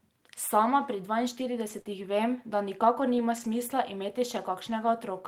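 Speech, hit by two kinds of network damage between about 1.4 and 4.7 s. Eleven times from 1.39 s to 4.70 s, the audio turns briefly rough and noisy for 20 ms: a lost packet rebuilt from error correction. The following packet carried a low-bitrate backup copy, and the decoder played that instead, so nothing drops out. Each instance sounds like one coarse, grainy frame in continuous audio, with no smear or stretch. They are loosely clustered around 1.7–1.8 s and 2.8–3.7 s.

At 1.81–1.87 s comes a different fault, a short concealed packet loss. About 40 ms never arrived, and no backup copy existed, so the receiver invented the missing stretch by carrying the preceding sound forward, then blended back into the real audio. What gives it away is the smeared, held-over quality. The error-corrected frames are roughened real audio, but this one is a brief wobble or extension of whatever came just before, where a short sound can vanish.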